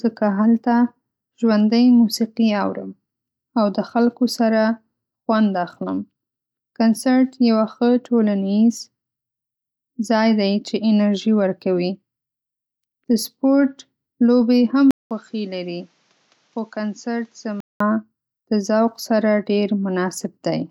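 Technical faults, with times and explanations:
14.91–17.80 s, input switched to a poorer device: After a silence of about 200 ms, the speech turns dull and boxy. Nothing is heard above 7.6 kHz, the level falls by around 10 dB, and a faint new background noise sits well below the speech. At 17.80 s the fuller sound returns. The likely cause is the recording input moving to a lesser microphone or a headset's call profile, which passes a narrower band and has its own tone and noise.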